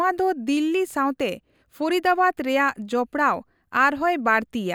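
Nothing goes wrong anywhere in this bit of speech, so there isn't a single technical fault to point out here.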